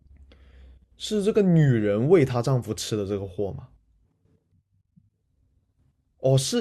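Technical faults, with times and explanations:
4.05–5.22 s: section at the wrong speed. Speech runs 1.71 times fast, hurried and raised by about ten semitones, likely played against a mismatched clock.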